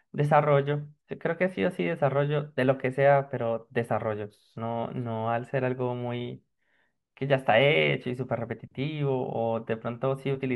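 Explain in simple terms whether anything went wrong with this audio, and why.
Nothing went wrong; no faults can be heard anywhere.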